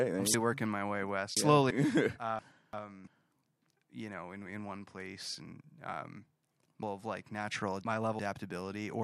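Speech with chunks out of order in three places: 0.34–1.71 s, 2.39–3.07 s, and 6.83–8.19 s just after "one place and um". Each time a 0.34 s block arrives late and plays after later blocks, three blocks late in the first and last spans and one in the middle. The sound jumbles at the hard joins. A spectrogram shows abrupt vertical seams where harmonics and formants jump discontinuously, and the waveform shows sudden steps in its envelope.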